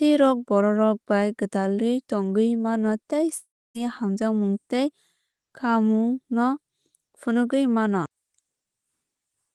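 At 3.37 s, after "tongwui mano tei", the sound trails into a fading buzz, then about 0.28 s of silence, and resumes at 3.77 s on "hamjakmung tei". This is likely a long network dropout. Unlike a brief packet-loss glitch, the fill dies away completely and the missing audio never comes back.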